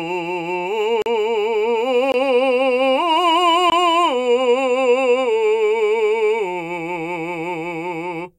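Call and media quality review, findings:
Block of digital silence in the music at 1.02–1.06 s (40 ms hole), 2.12–2.14 s and 3.70–3.72 s (20 ms each). Probable component: playback/render path, output buffer not filled in time. Hard cut to silence and back. Not packet-loss concealment, which fills gaps with smeared or repeated sound, and not a fade-type dropout, which has no edge clicks.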